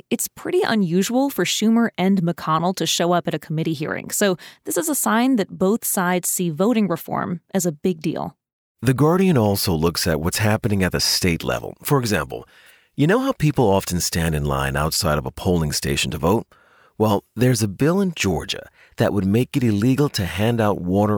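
No technical faults can be heard anywhere in the recording; the signal holds steady and continuous throughout the speech.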